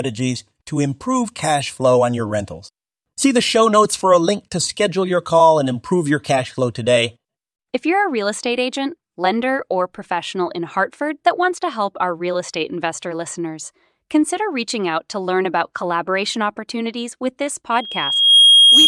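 From 17.71 s to 18.87 s, a microphone picks up the loudspeaker it feeds, and the loop gain passes unity at 3.3 kHz. This loudspeaker feedback squeal swells in under a second into a piercing tone about 10 dB above the speech.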